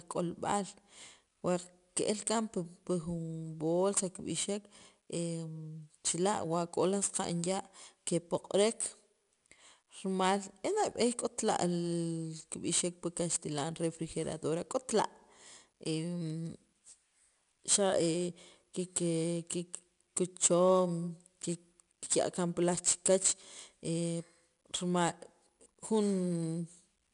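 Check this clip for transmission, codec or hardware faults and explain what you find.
One codec fault is present. Throughout, 4-bit ADPCM compression adds level-following gritty hiss and crunchy attacks, with nothing above 10.6 kHz, which fits 88 kbps ADPCM at about 22 kHz sampling.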